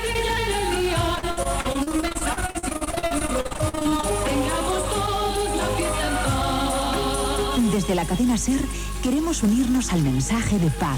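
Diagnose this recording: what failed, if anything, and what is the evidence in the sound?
The network dropped packets again and again, giving the repeated packet loss (robotic sound) from 1.15 to 4.05 s. The audio there turns choppy and robotic, with dozens of brief holes up to 61 ms. The receiver stretched the last good audio over each hole, and about a third of that stretch is patched this way.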